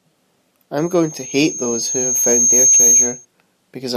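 A speech clip with loudspeaker feedback squeal from 0.77 to 3.25 s: a 6.4 kHz tone swells over about two seconds to roughly 10 dB above the speech as the mic-speaker loop exceeds unity gain. A spectrogram shows one brightening horizontal line; the waveform envelope swells steadily.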